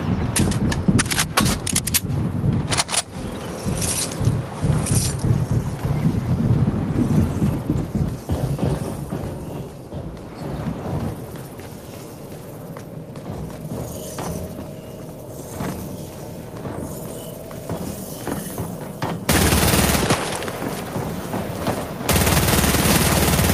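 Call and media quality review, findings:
Gain pumping, throughout: level ducks under each loud sound and recovers after, a swing of around 15 dB; dynamics squashed flat. Likely cause: input gain set far too high, with a fast limiter or compressor clamping each peak.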